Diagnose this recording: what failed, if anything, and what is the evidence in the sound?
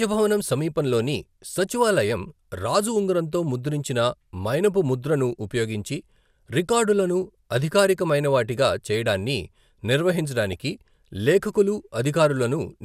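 A brief patch of a few watery blips at 10.52 s, short bursts of noise in single sub-bands. This is DAB burbling at the codec stage: weak reception let bit errors, well under one percent, slip past error correction into the MP2 data, corrupting what sounds like about two frames.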